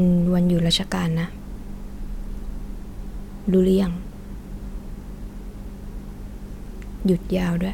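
No technical faults can be heard anywhere in the recording.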